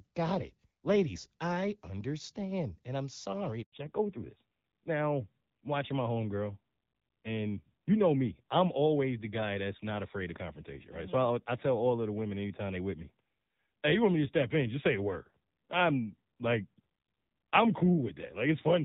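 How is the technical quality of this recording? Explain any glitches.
Two call-network glitches mark the recording, both at the same moment, right after "I'm sorry".

Handover gap, 3.62 to 3.72 s: the phone switched the call from one network to another, and no speech frames arrived while the link changed over. The voice fades out within a few tens of milliseconds and leaves a 100 ms hole of silence before the new connection picks up. Whatever was said in that tenth of a second is lost.

Fallback to narrowband, 3.72 s to the end: after the handover the call could not stay on HD Voice and dropped to an older narrowband codec, which fits AMR-NB at about 7.4 kbit/s. Before the switch, AMR-WB at 12.65 kbit/s carries the speech with only light codec colouring. Afterwards nothing above 4 kHz survives, so the voice loses its crispness and sibilant detail and sounds duller and rougher.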